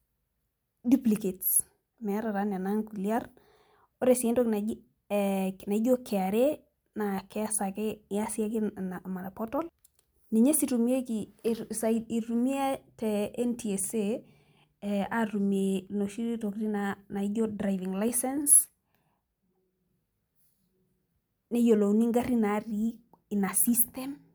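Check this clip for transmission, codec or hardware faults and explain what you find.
No faults detected.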